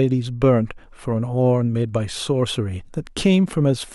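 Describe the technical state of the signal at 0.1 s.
At 0.1 s the signal is intact, with no audible technical fault at that moment.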